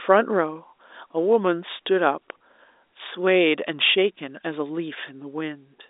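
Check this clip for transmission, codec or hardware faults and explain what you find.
Nothing stood out on listening to this speech, which comes through the narrow band of G.711 A-law telephone coding with nothing heard above about 3.8 kHz.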